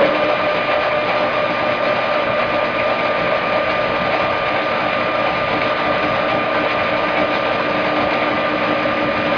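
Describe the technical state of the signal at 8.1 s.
At 8.1 s the signal is intact, with no audible technical fault in the sound at that moment.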